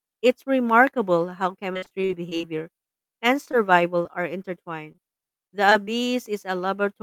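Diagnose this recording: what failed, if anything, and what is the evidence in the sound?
Network failure. Repeated packet loss from 1.73 to 2.64 s. Ten gaps, up to 50 ms, were each filled by stretching earlier speech. This gives a robotic sound.

Scattered short gaps from 3.45 to 5.89 s. Around ten isolated losses, each roughly 40 ms or shorter, were patched over. They cause brief ticks and smears.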